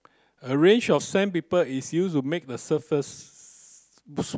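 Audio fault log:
No faults detected anywhere in this speech recording.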